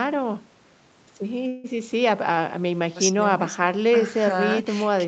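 Packets were most likely held up in transit, letting the jitter buffer run dry from 1.47 to 1.66 s. This is a call audio freeze: for about 165 ms the receiver stretches the last bit of speech into a short, fading buzz rather than dropping to silence. When delivery resumes, the speech carries on exactly where it paused, so nothing is lost, but everything after that point arrives about 165 ms later.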